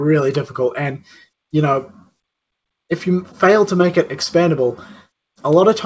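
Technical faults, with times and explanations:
0.98–1.25 s, sound cut by the noise suppressor: the suppressor misjudged the sound as background noise and applied extra gain reduction to it, pulling the level down by about 14 dB at its deepest for roughly a third of a second. The passage dips in level, while the band stops at 8 kHz, which points to a wideband call codec in the path.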